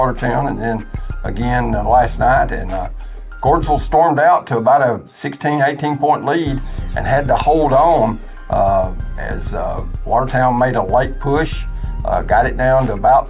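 No technical faults are audible.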